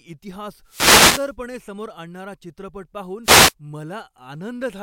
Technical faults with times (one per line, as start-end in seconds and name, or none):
0.64-1.34 wireless microphone noise hit
3.23-3.54 wireless microphone noise hit